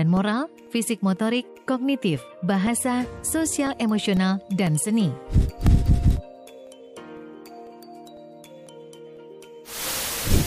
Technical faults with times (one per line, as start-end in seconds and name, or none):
0.17-10.17 periodic USB or driver dropouts